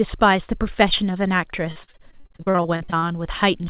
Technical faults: repeated packet loss (robotic sound)

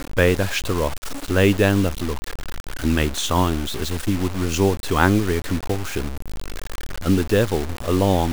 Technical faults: low bit depth without dither

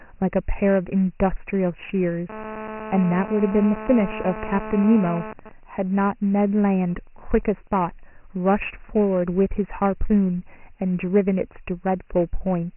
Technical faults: Dialogic VOX ADPCM; GSM phone buzz; GSM signalling bursts

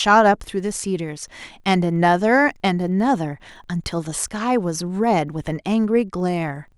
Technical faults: filter restarted on every block

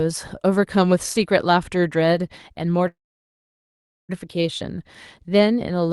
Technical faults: call audio freeze

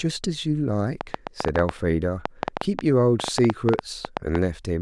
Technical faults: train of clicks

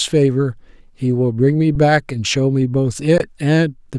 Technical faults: underrun with held sample

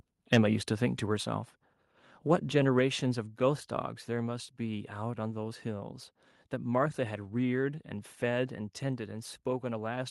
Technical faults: microphone volume stepped down

